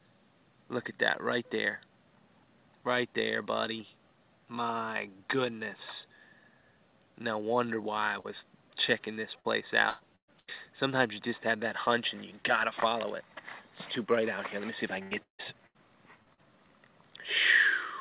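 A brief smear or wobble at 8.20 to 8.27 s is short concealed packet loss: about 40 ms of the call never reached the decoder in time, so the receiver continued the preceding sound to fill the hole and then blended back into the real audio. Two stretches, 9.40 to 10.50 s and 15.03 to 16.41 s, turn choppy, with pieces missing. This is repeated packet loss, heard as robotic sound. Packets went missing again and again, and each hole was patched by continuing the last sound before the next gap arrived. The first stretch has four gaps totalling about 350 ms, the longest 118 ms, so roughly a third of that span is concealed. The second has five gaps totalling about 390 ms, the longest 155 ms, covering about 28% of it. The audio also stops at 4 kHz, which points to a G.711 mu-law call path at 64 kbps.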